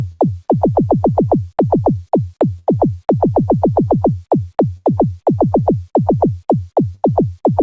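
Everyday sound at 0.12, 2.59, 4.77 and 6.95 s shows a burst of packet loss: about 80 ms drops out, bridged by a fading held continuation instead of a dead-silent dropout.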